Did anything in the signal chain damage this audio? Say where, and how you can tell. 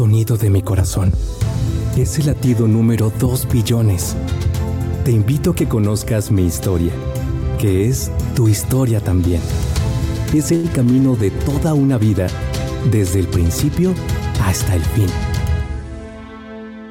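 Yes. At the network jitter buffer, a short stall from a late packet at 10.55 to 10.66 s holds the sound for 84 ms. Nothing is lost, but delay grows by 84 ms.

A jitter buffer speed-up follows from 14.37 to 15.81 s. Short pitch-period slices are cut, so the audio runs 4% fast at unchanged pitch and trims about 70 ms.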